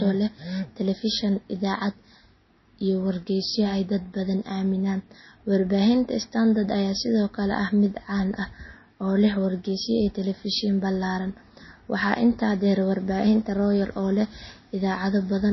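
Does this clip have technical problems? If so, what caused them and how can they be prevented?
Yes. Throughout the speech there is plainly audible MP3 compression damage, likely from encoding at a very low bitrate, something like 24 kbps. The treble stops dead at 5.8 kHz, and weak frequency lines switch on and off between frames, giving a watery, swirly texture and smeared consonant attacks. A spectrogram would show a hard flat ceiling at 5.8 kHz and speckled, flickering holes below it. Encoding at a higher bitrate, or using a lossless format, would prevent this.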